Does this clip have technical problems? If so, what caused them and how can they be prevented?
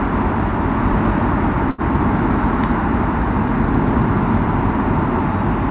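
Yes. There is a short stall from a late packet between 1.70 and 1.81 s. A packet arrived after its playout time and the jitter buffer ran dry. The receiver held the last bit of sound for about 80 ms and then resumed where it stopped. Nothing is lost, but the sound briefly smears and drags, and everything after it plays 80 ms later. The band stops at 4 kHz, as expected for a G.711 A-law call path. To prevent this, use a steadier network route or a slightly deeper adaptive jitter buffer.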